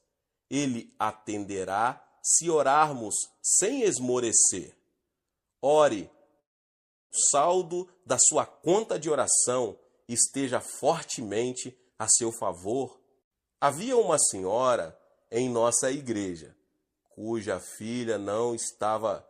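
At 6.39 s the stream was likely interrupted by a long network dropout. The receiver got nothing until 7.12 s and fell behind by about a fifth of a second. The last sound is stretched into a fading buzz for around 0.72 s. Roughly half a second of material is gone for good, and about 0.7 s of that fill is near-silence before the audio resumes further along, clipped where the lost stretch should be.

Once packets flowed again, the receiver was holding more buffered audio than its target, so a jitter buffer speed-up ran from 7.72 s to 10.45 s. It repeatedly removed tiny pitch-period slices, about 150 ms in total, to play at 105% speed. The pitch stays put while the pacing feels slightly rushed. A second pass from 10.84 s to 11.90 s cuts roughly 70 ms at 106%, with the same hurried quality.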